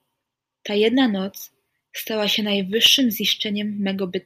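From 2.61 s to 2.99 s the speech carries four CD scratch ticks, evenly spaced at roughly eight per second. Each is a very short click or gap, the longest lasting about a millisecond. The regular spacing points to one blemish on the disc passing the pickup once per turn, each time corrupting more data than error correction could restore, so the player patched or muted those few samples and left a small discontinuity.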